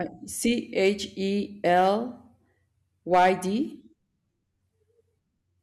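Speech with a burst of hard clipping from 3.13 to 3.29 s, overdriven by about 7 dB. The waveform's peaks are sheared flat there, and a spectrogram shows harmonics smeared far up into the high kHz range.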